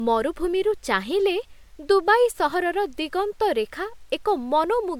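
Generation loss runs through the whole recording: the speech has a swirly, hollow smear, attacks on consonants are blurred, and nothing sits above 19.9 kHz. The damage sounds heavier than one MP3 pass near 100 kbit/s would leave, which points to the audio likely being decoded and re-encoded about four times. Each pass quantised on a shifted frame grid, so noise and spectral gaps kept piling up.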